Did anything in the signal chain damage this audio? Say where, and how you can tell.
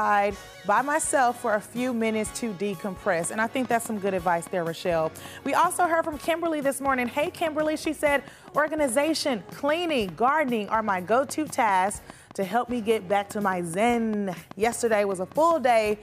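Yes. From 3.24 s to 15.92 s a train of clicks runs through the audio: sharp, near-identical ticks at a steady 4.97 per second, around seventy in total, peaking roughly 5 dB above the programme and audible in the gaps too. Such a regular, uniform pulse points to the analogue wiring or interface stage, likely from interference coupled in by nearby equipment or a struggling interface injecting the same transient on each cycle.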